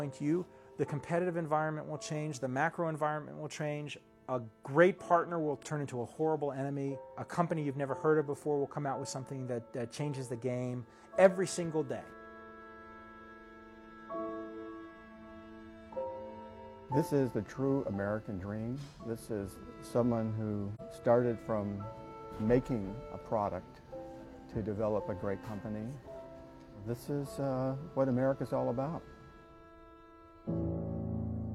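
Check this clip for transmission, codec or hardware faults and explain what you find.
There's one fault, a short dropout around 20.75 to 20.81 s. It's AAC frame loss with muting. A chunk of coded audio, roughly 43 ms and consistent with a single lost AAC frame, never made it to the decoder, so the decoder filled that stretch with silence. Because AAC frames overlap through their transform windows, the neighbouring frames fade the sound down into the gap and back up out of it, giving you a brief dip in the audio.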